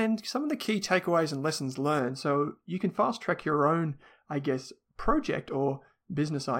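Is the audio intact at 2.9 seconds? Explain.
No. De-emphasis applied wrongly affects the sound from 1.99 s, just after "key takeaways and lessons", through to the end at 6.6 s, so 2.9 s falls inside it. A treble-cutting filter, meant only to reverse a matching high-frequency boost, has acted on speech that either never received that boost or had it undone already. The response rolls off smoothly toward the top, about 13 dB down at 10 kHz relative to 1 kHz, leaving the speech dull and muffled.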